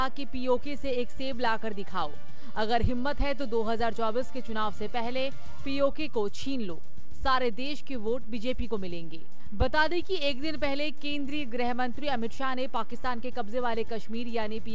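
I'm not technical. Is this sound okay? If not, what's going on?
No. There's a DC offset from start to finish: the whole waveform has been pushed off its centre line. You can't hear it directly, but it wastes loudness headroom and leaves steady energy at the very bottom of the spectrum. The audio also came through a call link, which is why nothing in it goes above 8 kHz.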